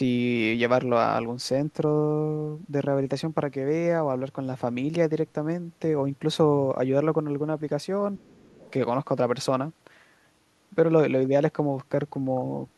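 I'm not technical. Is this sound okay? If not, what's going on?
No, not quite. From 8.18 to 8.54 seconds there's speech suppressed in double talk: the voice dips and breaks up, likely because the echo control muted it while both people talked. Overlapping that, from 8.28 to 8.72 seconds, the other side's voice leaks through faintly, a quiet second voice from this side's loudspeaker that likely wasn't fully removed.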